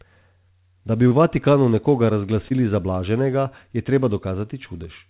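At 1.08 s to 1.13 s and again at 2.49 s to 2.52 s, the speech shows short concealed packet loss. Each time, about 20 ms of audio failed to arrive in time, and the receiver covered the gap by extrapolating the preceding sound before crossfading back into real signal. The patches run about 27 ms and 16 ms, and each is heard as a brief smear or wobble in the speech. The audio above 4 kHz is absent, consistent with a narrowband G.711-type call codec.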